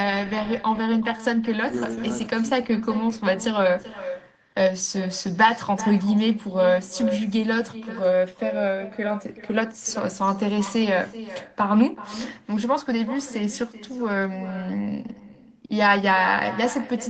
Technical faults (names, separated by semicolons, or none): echo with no canceller